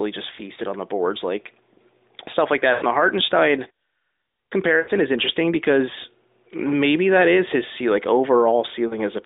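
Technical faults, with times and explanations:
0.36–0.43 s, 2.74–2.85 s, 4.80–4.91 s, 8.88–8.99 s, lost AMR speech frames: radio errors corrupted frames, so the AMR-NB decoder reused its last pitch and vocal tract settings with falling gain. The brief dips before "on the boards" and near the end fit one lost frame. The longer drawn-out fades after "stuff like" and before "is interesting because maybe" fit about four. Each time the voice returns weak or rough.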